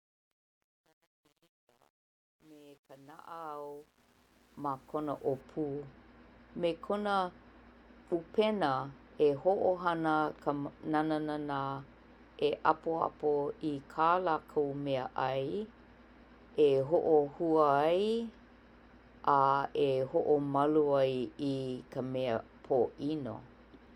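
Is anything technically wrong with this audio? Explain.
Yes. During the opening fade-in of the speech, from 0.0 to 5.41 s, the quiet start sounds gritty and grainy, worst from 0.0 to 4.56 s, before the fade clears at 5.41 s. This is truncation distortion on a fade. The gain stage keeps too few bits and adds no dither, so low-level audio collapses into coarse square steps. The roughness fits roughly a 9-bit word length.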